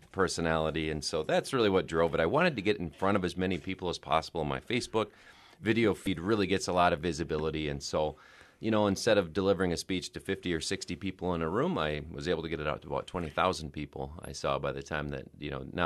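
At 6.04 to 6.07 s, damaged data in a compressed stream makes a short glitch. The decoder misreads the corrupted frames and resyncs at the next valid header. A spectrogram shows a thin vertical disturbance; the waveform shows a brief disruption.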